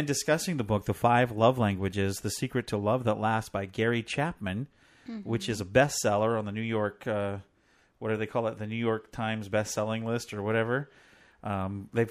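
Nothing in the speech stood out as a technical fault on listening.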